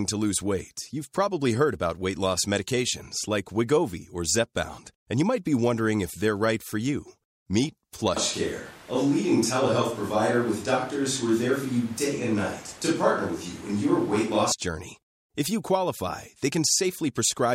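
From 8.17 to 14.52 s the close microphone likely cuts out, a switch to a distant microphone: speech abruptly turns roomy and hollow, with room noise about 25 dB below it.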